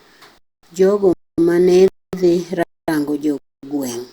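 At 0.38, 1.13, 1.88, 2.63 and 3.38 s the speech drops out for 250 ms, a gap between chunks each time. The audio arrives in blocks of 0.5 s, and silence sits between consecutive blocks rather than the next one following straight on. No speech is lost, but the flow stops at every join. The regular spacing of the holes gives the speech a stuttering, metered rhythm.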